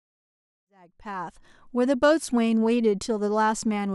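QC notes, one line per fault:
No faults found.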